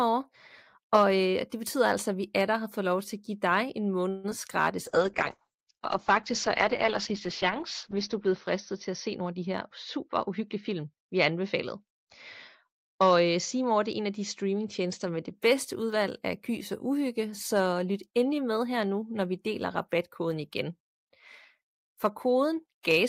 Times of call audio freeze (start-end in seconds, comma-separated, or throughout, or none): 4.09-4.26